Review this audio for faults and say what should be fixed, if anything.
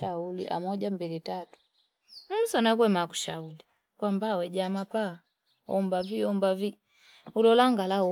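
No faults found; nothing to fix.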